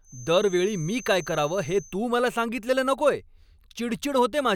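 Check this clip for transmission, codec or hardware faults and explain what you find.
One fault is present, a feedback whistle over the first two seconds of the speech. From 0.0 to 2.0 s, just before "मला सांगितलेलं नकोय", a thin tone at 6.2 kHz sits about 20 dB below the speech, swelling and fading slowly in level. The likely cause is a loudspeaker-to-microphone loop held just at its feedback threshold, sustaining one frequency without growing. Unlike a runaway howl it never builds in level, and unlike an electrical tone it drifts rather than holding perfectly steady.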